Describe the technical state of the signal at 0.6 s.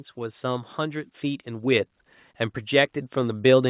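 At 0.6 s the speech and the background noise under it are swelling together, both growing steadily louder with no change in character. This is automatic gain rising, which runs from 0.14 s to the end of the clip. The gain control judged the incoming level too quiet and is slowly raising its gain, so everything in the signal is lifted at once rather than only the voice. The sound stays band-limited to about 4 kHz, consistent with a G.711 call codec.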